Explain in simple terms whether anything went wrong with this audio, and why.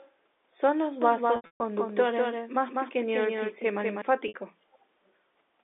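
Three separate problems can be heard in this speech recording.

From 1.02 to 4.02 s the speech seems to have a twin: a second, only slightly quieter copy trails the original by about a fifth of a second and then cuts off suddenly. This is a doubled audio track. It has no room echo or fading tail, so it is not a reflection. The likely cause is the same audio being mixed in twice, once through a slower path.

Around 1.36 to 1.60 s the sound stumbles. Bits of it hang on as a brief buzzy held tone, and the longest gap, about 0.14 s, fades toward silence before the speech resumes. A shorter hiccup of about 0.06 s comes at 4.28 to 4.34 s. This is packet loss with pitch repetition. Pieces of the transmission went missing, and the receiving end filled each hole by repeating the last fragment of sound and fading it out.

At the very start, up to 0.15 s, and again at 4.73 to 4.78 s and 5.07 to 5.11 s, a very faint ghost of earlier speech slips in, lagging almost half a second behind. 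This is an echo leak. It is likely that someone on the call was using a loudspeaker, and their microphone picked it up. Their echo canceller then missed small scraps, which travelled back down the telephone-quality line.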